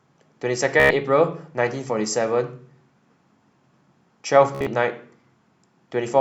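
At 0.80 s the speech breaks into a brief machine-gun buzz lasting to 0.91 s, and at 4.55 s a second, choppier burst runs to 4.67 s, broken into scattered repeats with the longest run 58 ms. Both are Bluetooth stutter: packets arrived late or not at all, so the receiver kept replaying its last short slice until fresh data came. About 0.1 s of speech goes missing each time, consistent with roughly seven lost packets.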